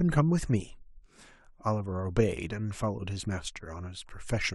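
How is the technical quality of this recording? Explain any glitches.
No technical faults or glitches can be heard here.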